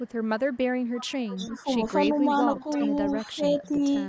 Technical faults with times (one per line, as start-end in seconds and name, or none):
0.00-0.13 echo leak
0.53-1.57 echo leak
1.51-1.67 speech suppressed in double talk
2.02-3.13 echo leak
3.35-3.82 speech suppressed in double talk
3.61-3.66 echo leak